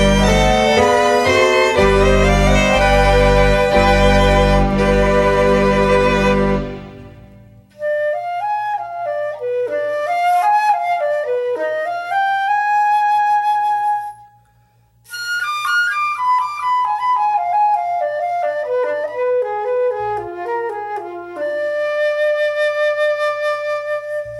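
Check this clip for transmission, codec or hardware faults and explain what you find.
Nothing stood out on listening to this clip.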